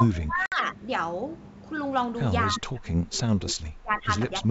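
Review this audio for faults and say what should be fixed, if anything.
Speech suppressed in double talk, from 0.0 to 0.9 s, 2.5 to 4.11 s, and 4.3 s to the end: the level dips by about 20 to 25 dB, likely an echo canceller muting both talkers. Fix it with a canceller that detects double talk and freezes adaptation instead of attenuating.

Packet loss on an ADPCM call, at 0.46 to 0.55 s: a 60 ms hard-edged hole, which fits about three lost packets. Speech returns slightly distorted while the decoder's predictor and step size resynchronise. That recovery artefact sets it apart from simple suppression. Prevent it with concealment that resets or re-syncs the ADPCM state. The G.722 coding at 64 kbit/s shows faint or no damage of its own.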